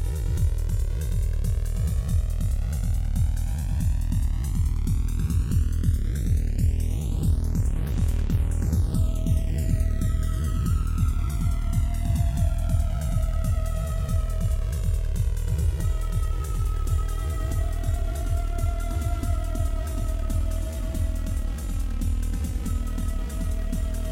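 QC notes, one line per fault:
throughout channels drifting apart: separate clocks about 300 ppm apart slide inter-channel delay to roughly 4 ms; mono sum shows comb notches sweeping on spectrogram, heard as slow flanging.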